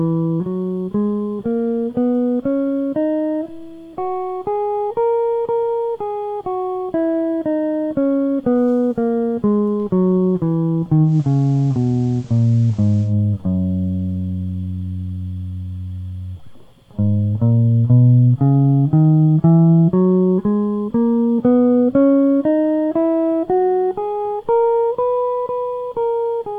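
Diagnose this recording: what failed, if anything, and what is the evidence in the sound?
A bit error spike at 9.68 s shows up as a single sharp tick across the whole spectrum, unrelated to the music. One flipped bit in storage or on a digital link pushed one sample by a power of two before it snapped back.

Digital radio blending to analogue runs from 11.03 s to 13.15 s. A 133 ms cross-fade brings in the FM signal. Hiss rises to about 35 dB below the music while the level holds steady. The receiver lost its digital stream and fell back to the analogue broadcast.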